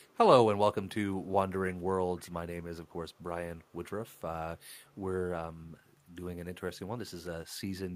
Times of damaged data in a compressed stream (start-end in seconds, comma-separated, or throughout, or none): none